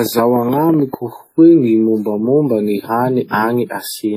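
From 0.06 to 0.95 s, a train of clicks ticks over the speech. There are about ten, roughly 10.3 per second at an uneven pace, peaking about 10 dB above the signal. A faulty connection or nearby interference is the likely source. Throughout, heavy WMA compression damage gives a ringing, washy sound with breathing hiss, which fits a low bitrate near 32 kbps. Nothing remains above 19.5 kHz.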